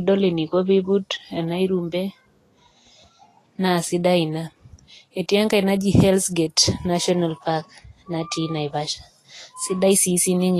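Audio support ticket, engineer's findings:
Vorbis compression, throughout the speech. Treble hissy and grainy, fine detail turned to noise. Tones roughened, consonant attacks blurred. Nothing above 14.2 kHz. Likely cause: low-quality Vorbis encode, damage consistent with a bitrate near 32 kbps. Mechanism: smooth spectral floor plus coarsely quantised residue; upper band replaced by noise of similar energy, cut-off lowered. Damage plainly audible.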